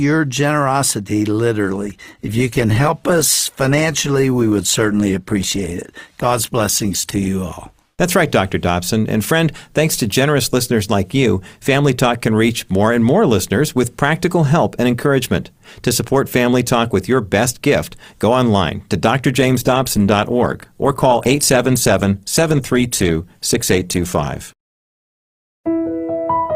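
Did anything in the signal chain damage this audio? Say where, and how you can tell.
Yes. A call bitrate drop in the codec, 1.7–7.37 s and 19.4–25.21 s, sounds rough and coarse, consistent with roughly 48 falling to 16–18 kbps; spectrograms show smeared, blocky high-frequency detail.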